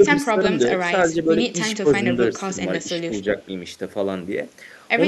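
Speech suppressed in double talk at 0.26–0.55, 0.83–1.38, 1.83–2.06 and 2.31–2.59 s: the speech dips briefly, by roughly 5 to 10 dB, likely from an echo canceller ducking during simultaneous talk.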